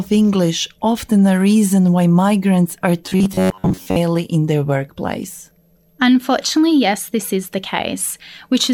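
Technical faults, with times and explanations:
3.06 to 3.96 s: robotic sound from repeated short buffers. The speech becomes a stiff metallic buzz pitched at 93.8 Hz, likely from a fragment of about 10.7 ms being replayed while roughly two thirds of the real audio is skipped.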